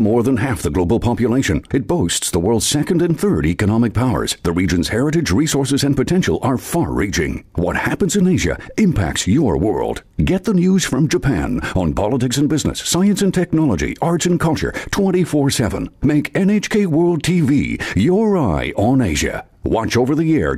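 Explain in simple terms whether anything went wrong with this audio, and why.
Nothing stood out as going wrong when listening to this audio.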